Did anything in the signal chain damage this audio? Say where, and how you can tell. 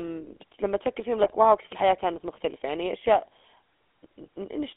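Yes. Throughout, the speech has the buzzy, gravelly roughness of the GSM full-rate codec, a codec-stage fault. This codec rebuilds speech from a vocal-tract filter driven by a sparse, regularly spaced pulse excitation, and that coarse excitation is what grates here. The sound fits 13 kbps coding. On a spectrogram the content sits between 250 Hz and 3.5 kHz, with nothing above. The harmonics look smeared and noisy instead of cleanly striated.

GSM bit errors, a network-stage fault, hit from 1.22 to 1.35 s, where the sound breaks into a short squawk and gargle. Corrupted bits reached the decoder, so the filter, pitch or gain values it applied were wrong, bending the spectrum and throwing the level. The 130 ms span fits a handful of consecutive 20 ms frames. The waveform shows an abrupt, misshapen burst there, and the spectrogram shows a blocky, discoloured patch.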